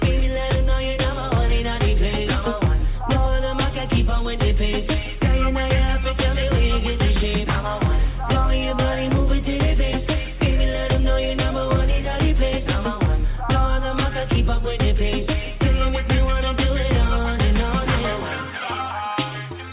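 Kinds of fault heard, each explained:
Nothing stood out on listening, with the sound arriving through an ordinary call path whose narrow band, with nothing above 4 kHz, is simply how that path carries it.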